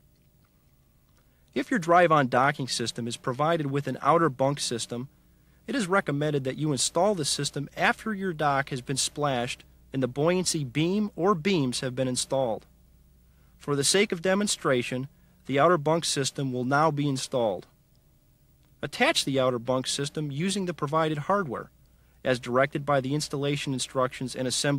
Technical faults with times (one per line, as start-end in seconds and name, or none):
none